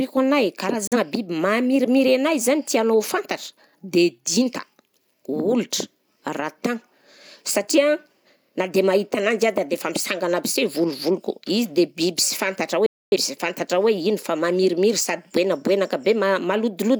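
Digital broadcast dropouts occur at 0.87 to 0.97 s and 12.86 to 13.16 s. Each time, the receiver stopped getting decodable frames and muted, with a fade of about 3 ms into silence, until good data returned. The first gap is brief, consistent with a single lost frame. The second, about 0.3 s long, points to a run of six. The speech sent during each gap is simply missing.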